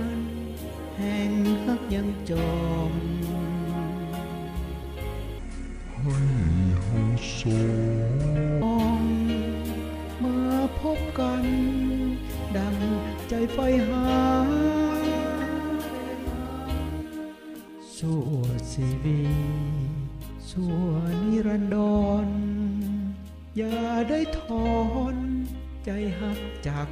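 From 5.38 s to 8.62 s there is a section at the wrong speed: the audio runs at 0.65 times its proper rate, dropping pitch by roughly seven semitones, so it turns deep and slow. This likely came from that stretch being resampled against a mismatched clock.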